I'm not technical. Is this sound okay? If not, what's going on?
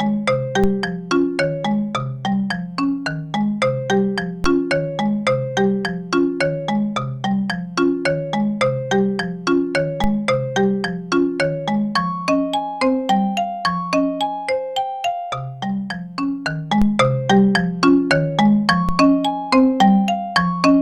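No. There are five DC steps, at 0.64, 4.44, 10.04, 16.82 and 18.89 seconds. Each time, the signal's resting level suddenly jumps off centre. You hear a low thump. The offset then fades back, while the sound carries on unchanged.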